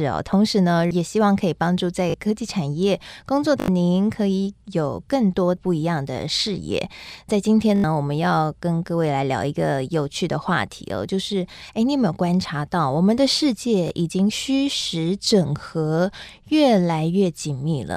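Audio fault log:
2.10–2.14, 3.60–3.68, 7.76–7.84, 13.88–13.90 s: repeated buffer. Late audio makes one 20 ms chunk replay up to four times, giving brief buzzy stutters with hard joins.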